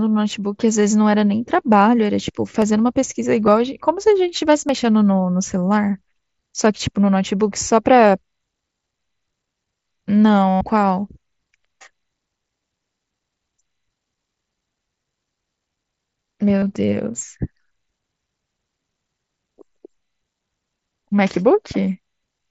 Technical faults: dropped samples; concealed Bluetooth headset packet loss

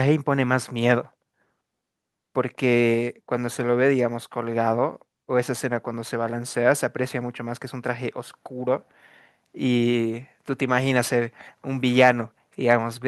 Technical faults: microphone overload

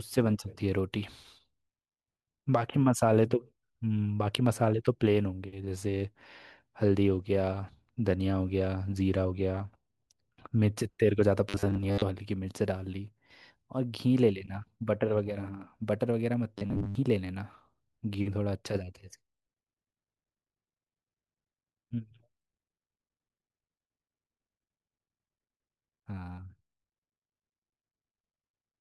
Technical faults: robotic sound from repeated short buffers

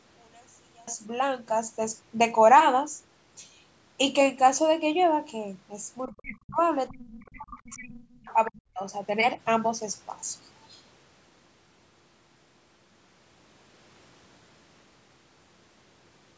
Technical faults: one channel inverted; speech suppressed in double talk; other side's voice leaking through

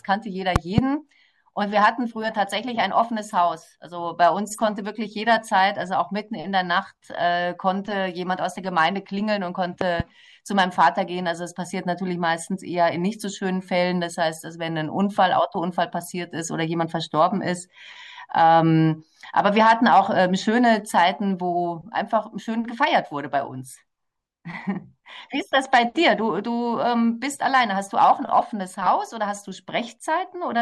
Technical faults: loud pop

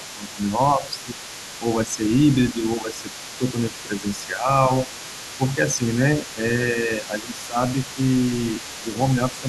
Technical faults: speech suppressed in double talk; other side's voice leaking through

